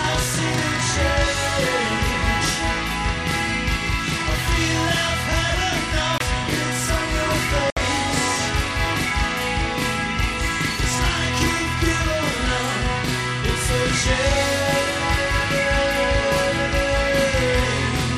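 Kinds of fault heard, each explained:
Channel delay (doubling), throughout: one side of the stereo pair runs 40 ms behind the other, and when the two are folded down to mono the late copy doesn't blend in. It sits just behind the original at the same level, so every sharp onset is heard twice, giving a thickened, slapback doubling across the whole clip rather than a single clean image. The 40 ms gap is long enough to separate the two copies audibly.
Bluetooth stall, at 6.18 s and 7.70 s: the audio drops out to silence twice, for about 23 ms at 6.18 s and about 66 ms at 7.70 s, then resumes. The likely cause is a wireless link where interference delayed packets long enough for the headphones' playback buffer to empty. Output halts until retransmitted data arrives, and the sound continues from roughly where it broke off.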